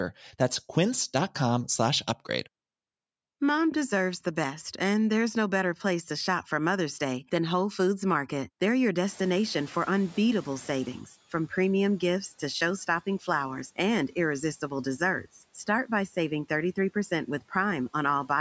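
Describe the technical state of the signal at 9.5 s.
At 9.5 s the noise suppressor is catching up: the room noise jumped around 9 s, so it leaks through until the estimate adapts, dropping about 11 dB by 11.03 s, just before "from premium gifts to".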